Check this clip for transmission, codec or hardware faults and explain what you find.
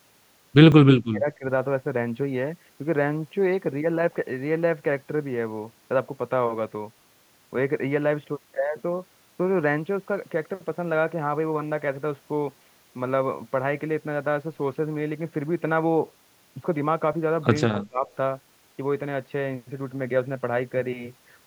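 The speech in this clip has three kinds of fault, clustered near the start and again around 17 s.

Dropped buffer (overrun) at 0.72 s and 17.13 s. Each is a jump in the sound. Nothing goes silent. The audio simply skips ahead. The first loses a few milliseconds, the second about 10 ms. The likely cause is the program failing to collect its samples before the hardware overwrote them. The missing piece vanishes and the two edges butt together.

Speech suppressed in double talk from 0.93 to 1.45 s and from 17.69 to 18.08 s. The talker's level dips while the far side is also talking. The first dip goes down about 35 dB, over roughly 0.4 s in total. The second is shallower, about 20 dB, over roughly 0.3 s. The echo canceller likely could not tell the near talker from loudspeaker echo, so it turned both down.

Echo leak from 17.82 to 17.87 s, inside the second suppression. A brief, faint copy of the voice comes back 208 ms late. 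It sits about 30 dB below the speech and lasts only a short scrap. The likely cause is a loudspeaker on one end whose echo canceller left some of the microphone pickup in the signal. That leftover was sent back down the line.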